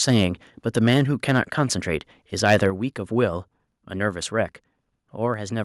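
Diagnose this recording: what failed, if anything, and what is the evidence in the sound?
The loudest syllables carry a harsh, crackling edge at 0.08–0.23 s, 0.77–1.02 s, 1.29–1.40 s and 2.45–2.63 s, with peaks pushing about 3 to 5 dB past full scale and a few percent of samples flattened. That is microphone overload at the converter stage. The input gain was likely set too high, so the waveform tops hit the converter's ceiling and were sliced off, adding hard-edged distortion.

At 2.70 s, just after the strongest distorted peak, the speech and its background drop together by about 4 dB in a single step. A second, smaller step of about 2 dB follows at 3.72 s. This points to the microphone volume being stepped down during call processing. The call software likely detected the clipping and cut the device's input gain in discrete jumps rather than riding it smoothly.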